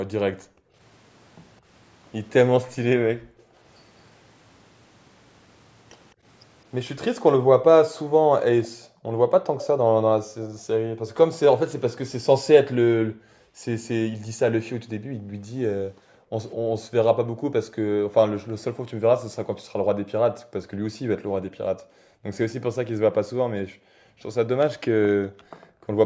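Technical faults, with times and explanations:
0.31–0.76, 3.15–3.58, 7.93–11.09, 13.03–22.31 and 23.59–25.92 s, background gated by the echo canceller: the room sound sinks by about 30 dB at first and about 40 dB later, then returns. Nothing is added; the canceller clamped the microphone while the far side played.
8.63–11.14 s, echo leak: a faint delayed copy of the speech trails it by about 207 ms, roughly 15 dB below, likely because the echo canceller let loudspeaker pickup slip through. Unlike the gating, which removes background, this adds a second, repeated layer of speech.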